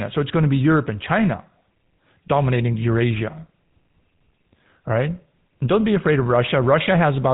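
GSM full-rate codec damage runs through the whole speech clip, from start to finish. The codec rebuilds each stretch of speech from a vocal-tract filter fed by a sparse, regularly spaced pulse train, so the fine texture of the voice is replaced by a coarse approximation. The result is a plainly audible buzzy, gravelly roughness. Nothing survives above about 3.8 kHz, which leaves the sound muffled and telephone-like, and the rate points to the 13 kbps full-rate mode.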